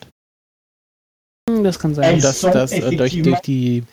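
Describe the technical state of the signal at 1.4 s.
At 1.4 s the speech shows a clipped start after a pause: after about 1.2 s of silence, the output device wakes late, swallowing roughly 0.22 s (1.26–1.48 s) so sound begins abruptly. Unlike muted pauses, actual speech is lost.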